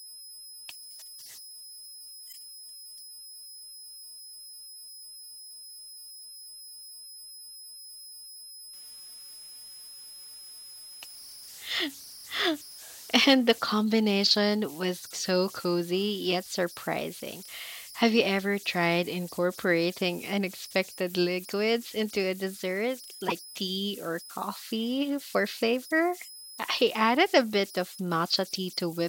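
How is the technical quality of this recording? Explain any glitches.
The recording has three technical problems: a constant whistle, two brief decoding glitches, and a stretch of added roughness in the middle of the speech.

Converter idle tones run through the whole clip. A delta-sigma converter working without dither falls into repeating bit patterns on quiet input, and here those patterns produce a tone at around 5 kHz, about 20 dB below the speech. It is heard as a thin whistle in the pauses and as grain under soft syllables. On a spectrogram it appears as a steady horizontal line near 5 kHz that is clearest between phrases.

Damaged data in a compressed stream causes two glitches, from 2.29 to 2.34 s and from 23.26 to 23.32 s, each lasting under 60 ms. Corrupted bytes in the encoded stream made the decoder misread frames and lose sync, and it then had to find the next valid frame header. 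Each glitch is heard as a short squawk or chirp. A waveform shows an abrupt discontinuity at each point. A spectrogram shows a brief broadband smear or blocky patch that breaks the normal speech harmonics.

Sample clock jitter roughens the audio from 8.73 to 13.58 s. The converter clock wandered by something like 4 microseconds rms, so samples were taken slightly early or late. The resulting error grows with the waveform's slope, reaching roughly 25 dB below the speech. It is heard as a hiss that swells on loud and bright sounds such as sibilants and drops away in gaps. On a spectrogram it appears as a raised noise floor in the upper frequencies that follows the speech energy during that stretch only.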